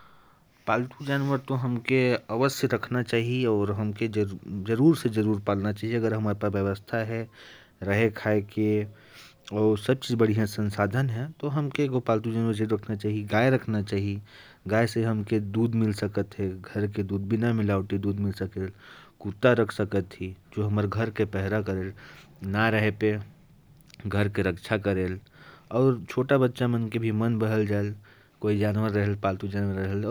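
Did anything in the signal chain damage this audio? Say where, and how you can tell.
No, nothing in the signal chain has damaged this speech recording. I can't point to any stage where the audio has been harmed.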